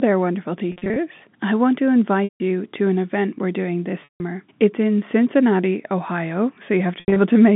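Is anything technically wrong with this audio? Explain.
Yes. There is packet loss with pitch repetition at 0.72 to 0.96 s, 2.25 to 2.40 s, 4.04 to 4.20 s and 7.00 to 7.16 s. Audio went missing, 140 ms scattered in runs of up to 40 ms, then 160 ms, 160 ms, and 120 ms with a longest run of 80 ms. Loss in 20 ms steps fits that packet size. The receiver filled each gap by repeating the last pitch cycle and fading it out. The short runs sound like a briefly held buzz. The longer ones sink into silence before the sound cross-fades back. All of this sits on a narrow telephone band of about 150 Hz to 3.6 kHz.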